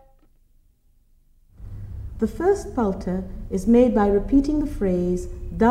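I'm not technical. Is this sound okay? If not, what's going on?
Yes, nothing here sounds wrong or damaged.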